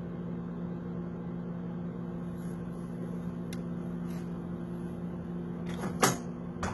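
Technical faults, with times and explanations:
Throughout, HE-AAC compression: the upper spectrum is likely being rebuilt by spectral band replication rather than coded, with heavy codec damage that fits a very low bitrate of around 16 kbps. Lower bands are copied upward and shaped only by a coarse envelope, so the treble keeps its brightness but its harmonics no longer line up with those below the crossover. Sharp, bright sounds take on a gritty, metallic edge, and nothing is heard above about 11.8 kHz.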